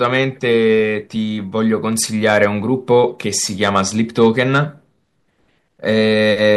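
A stage in the chain runs out of headroom three times, and the speech peaks are sliced flat as hard clipping: from 2.27 to 2.45 s and from 3.63 to 3.80 s, each overdriven by about 3 dB, then from 4.22 to 4.59 s by about 2 dB. The squared-off tops add harmonics high in the spectrum. Because the overload is slight, each burst is heard as a brief crackly roughness on the loudest syllables rather than a continuous fuzz.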